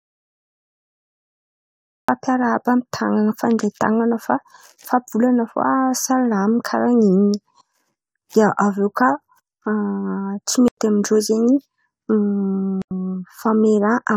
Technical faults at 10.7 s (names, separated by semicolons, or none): block of digital silence